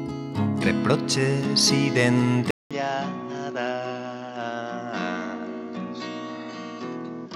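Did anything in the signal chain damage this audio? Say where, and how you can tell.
Yes. At 2.51 s the sound cuts out for about 0.2 s, then returns roughly 10 dB quieter, duller and boxier, with nothing above 7.6 kHz and new background noise some 35 dB down. The input was likely switched to a poorer device at the driver stage.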